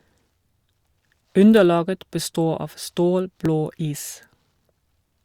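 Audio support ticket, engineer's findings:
Clock drift buffer slips. Short clicks in the speech at a steady 1.31 s spacing, 0.82 s to 4.76 s, about four in all. Likely cause: two devices on independent clocks, off by several hundred ppm, so the buffer drifts until a few dozen samples are dropped or repeated. Spectrogram: thin broadband vertical lines at even spacing. Waveform: an abrupt step or jump at each slip point.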